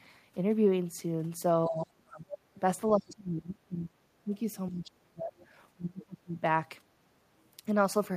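Speech runs through a recurring pattern of the talker's voice sinking away while a second voice briefly breaks in. A faint trace of another talker sits under the speech from 1.65 to 1.81 s, about 40 dB down, then surfaces much more clearly from 2.30 to 2.37 s at roughly 15 dB below the speech. This is the other side's voice leaking through: the far end plays on a loudspeaker, the microphone picks it up again, and the echo canceller has likely failed to strip it out, leaving short scraps behind. Overlapping that first leak, the main voice collapses from 1.66 to 2.33 s, and the same thing happens from 2.90 to 4.31 s, 4.70 to 5.35 s and 5.74 to 6.43 s. In each stretch the level falls by somewhere around 25 to 35 dB, so the voice sounds pushed back or chopped into pieces rather than cleanly present. That is speech suppressed in double talk: with both sides talking at once, the canceller likely could not separate the local talker from the loudspeaker echo and turned the whole signal down, muting the wanted voice along with the echo.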